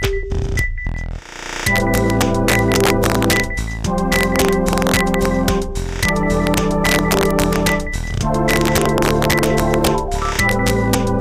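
Sharp, violent cracks burst out on the loudest moments across the whole sound, harsher and more abrupt than ordinary clipping distortion. This is integer overflow. The signal was pushed about 5 dB past the largest value the integer format can hold, and instead of being limited, each over-range peak wrapped around to the opposite extreme. Only a small fraction of samples, well under one percent, cross that line, but each one jumps across the full range and produces a crack.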